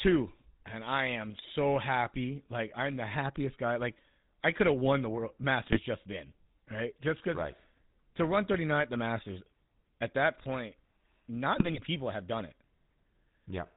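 The speech carries the GSM full-rate codec throughout. Its pulse-driven vocal-tract model leaves a buzzy, gravelly roughness and nothing above 4 kHz, which fits a 13 kbps stream. The grit lies in the voice itself, not just in missing treble.

GSM bit errors strike from 5.62 to 5.79 s, after "have won the world", and from 11.56 to 11.81 s, before "people have done it". Corrupted decoder parameters give squawks and gargling, not clean dropout gaps.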